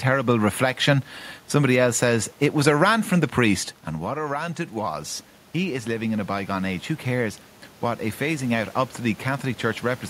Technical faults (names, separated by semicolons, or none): automatic gain rising